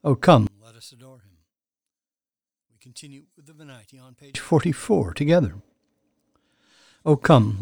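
Speech recording in which, from 0.47 to 4.35 s, the centred sound nearly disappears, dropping about 30 dB; one channel inverted in polarity is the likely cause, cancelling shared content when summed to mono.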